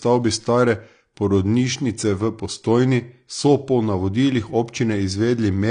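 AAC compression damage runs throughout this speech clip: nothing is present above about 9.8 kHz, and the audio sounds dull and smeared. The likely cause is AAC-LC coding at a low bitrate, which fits roughly 32 kbps, trimming high frequencies to save bits.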